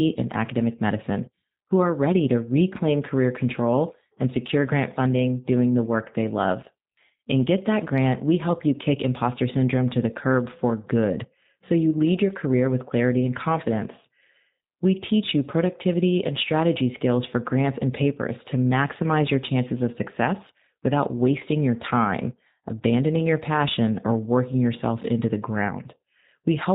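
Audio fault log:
throughout G.729 codec: speech rebuilt from a vocal-tract filter and sparse pulses, fitting an 8 kbit/s stream, cuts everything above 4 kHz and leaves it rough and synthetic.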